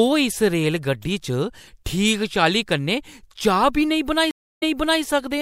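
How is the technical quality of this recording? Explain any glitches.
One glitch stands out near the end. From 4.31 s to 5.02 s, a stream reconnect breaks the speech. The connection dropped, and the player restarted its decoder mid-stream. A gap of about 0.31 s of silence follows. The speech then resumes 0.41 s earlier, so a short stretch repeats.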